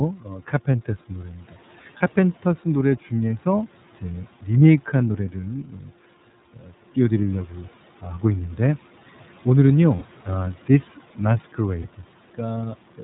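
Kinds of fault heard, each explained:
iLBC codec: The whole clip carries narrowband iLBC coding, with nothing above 4 kHz and a plainly rough, slightly synthetic edge to the speech. The coarseness fits a 13.33 kbps stream with 30 ms frames, each coded on its own.
Speech cut by the noise suppressor: Three times, around 0.16 to 0.67 s, 5.64 to 5.9 s and 6.54 to 6.72 s, the suppressor mistakes bits of speech for background and pulls them down by up to about 10 dB, leaving short, faint, swallowed stretches.
Lost iLBC frames: At 1.98 s, 9.96 s and 11.82 s the decoder fills missing packets by repeating the last pitch cycle with some noise, giving a brief held, buzzy vowel of 30 to 60 ms before clean speech snaps straight back.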